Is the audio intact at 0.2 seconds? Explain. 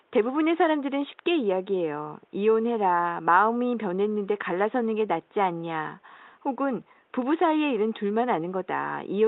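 Yes, the audio is intact at 0.2 seconds, with only the faint room noise about 41 dB below the speech and the band-limited sound of the call path, which fits a 12 kHz Opus bandwidth.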